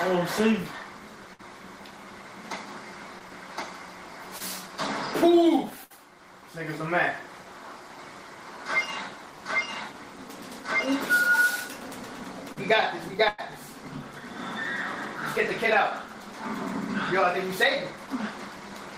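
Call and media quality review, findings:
Burst of packet loss at 1.33–1.41 s, 5.84–5.92 s and 13.28–13.40 s: consecutive packets lost or late at the jitter buffer, about 60, 60 and 100 ms gone. The decoder extends the last sound and fades it (roughly 55, 61 and 103 ms of fill, no silent gap), then playback jumps ahead.

Short concealed packet loss at 3.19–3.22 s, 4.38–4.42 s and 12.52–12.58 s: 20, 20 and 40 ms missed decoder deadline. Concealment continues the preceding sound for 12 to 39 ms and crossfades back, giving a brief smear or wobble.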